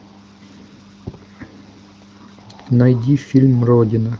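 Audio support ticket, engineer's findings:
No faults found on this speech clip.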